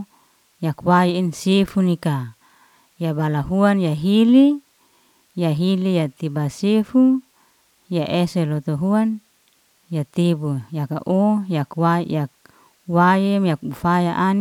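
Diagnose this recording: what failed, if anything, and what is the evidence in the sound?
Nothing failed in any stage of this speech recording; the signal chain shows no audible fault anywhere in the clip.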